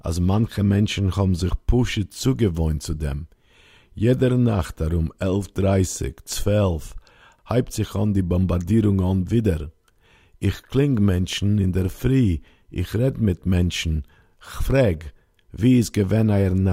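Nothing in this bit of speech stands out as a technical problem, so there's nothing to pin to a time or trace back to a cause.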